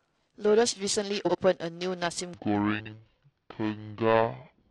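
Right from the start there's periodic clock jitter running under the whole clip. Something is wobbling the converter's clock at a steady rate, somewhere around 1 kHz, so every component of the speech picks up sidebands spaced that far above and below it. The higher parts of the voice suffer most, and that gives everything a rough, metallic edge. It drops away in the gaps, because with no signal there's nothing to modulate.

At 1.25 s you get the first case of frames out of order, lasting to 1.35 s. Two neighbouring runs of frames were decoded in swapped order, each about 42.7 ms long, which fits two frames per run. That short stretch plays with its halves exchanged, so it comes across as a brief garbled flutter. Nothing is lost from the timeline. It's just shuffled.

From 2.34 s to the end, the section is at the wrong speed. It plays at 0.642 times the proper rate, which is most likely a player or editor working to the wrong clock. 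Pitch and tempo fall together, roughly seven semitones down, so the voice suddenly goes deep and sluggish at that point. Inside that slowed stretch, frames are out of order again from 2.79 to 2.93 s. This time the two swapped runs are about 64 ms each, which points to three frames apiece, and there's the same fluttery scramble.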